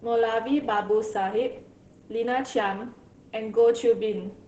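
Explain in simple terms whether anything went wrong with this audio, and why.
Opus voice compression affects the speech from start to finish. The audio was squeezed into very little data. Everything above 8 kHz is cut away, so the speech sounds muffled. The heavy compression also makes it hoarse and slightly robotic.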